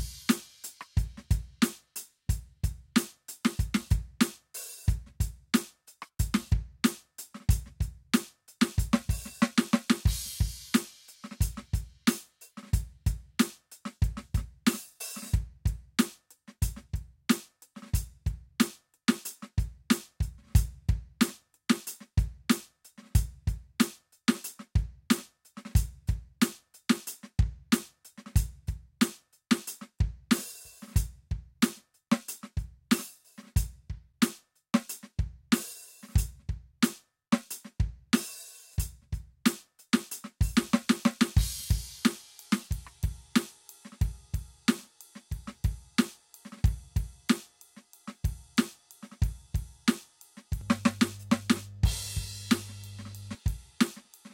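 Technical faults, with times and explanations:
50.61–53.35 s, mains hum: a steady low tone at 50 Hz rises under the music for about 2.7 seconds and then stops, sitting fairly prominently at roughly 15 dB below the programme level. A 50 Hz fundamental points to power-line interference from a European-style supply, coupled into the signal path through a ground loop or the stray field of a nearby transformer. The result is a constant drone under the music.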